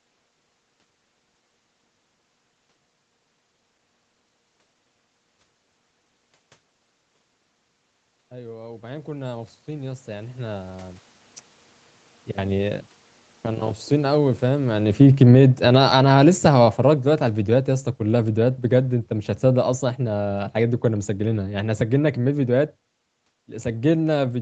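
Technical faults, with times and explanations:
8.29–11.08 s, automatic gain rising: After the talker draws back from the microphone around 7 s, the input drops by about 18 dB. The automatic gain control responds by raising its gain by about 13 dB over nearly three seconds, so the voice and the room noise swell up together. On the waveform the envelope widens steadily across this span. On a spectrogram the whole band brightens at once, with the noise floor between phrases lifting along with the speech.
13.9–22.79 s, automatic gain falling: The talker comes back close to the microphone around 14.5 s, so the level arrives too loud and the gain control pulls its gain down by about 18 dB. This happens slowly, over roughly nine seconds. The speech starts out hot, then gradually sinks, and the background noise sinks with it. The waveform shows a tall envelope tapering smoothly downward. On a spectrogram the energy across the band, still capped near 8 kHz by the call path, fades evenly along with the gaps between phrases.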